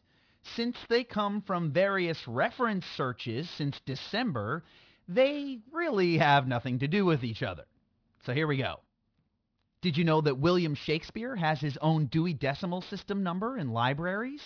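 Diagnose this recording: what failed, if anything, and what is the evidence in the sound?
Aliasing from a sample-rate conversion stage, present throughout. Sibilants sound gritty and metallic, and energy runs hard up to 5.5 kHz, which fits downsampling to about 11 kHz with no anti-alias filter. High-frequency content folds back as unrelated tones about 25 dB below the speech.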